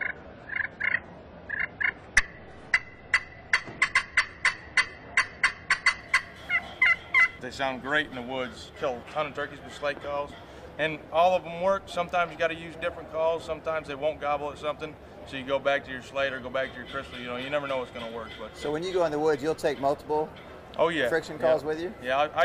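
For the first 6 s it's an adaptive stream starting at a low bitrate: nothing above 10.2 kHz, stronger codec artefacts, fitting roughly 24 kbit/s, then it cleanly jumps up.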